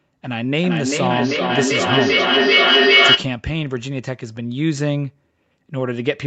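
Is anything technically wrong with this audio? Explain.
Yes. From 0.41 to 3.34 s there is feedback echo between two devices. The speech returns roughly every 0.4 s, each repeat thinner and more ringing. Instead of dying away, the repeats build until the loudest is about 7 dB above the speech itself. The loop forms when one device plays what a second device's microphone sent. That microphone hears it again, and neither echo canceller removes sound played by the other device. On a waveform, the envelope swells with evenly spaced copies. On a spectrogram, the same patterns stack at regular intervals, narrowing toward ringing bands, all below the 8 kHz upper limit of the call path.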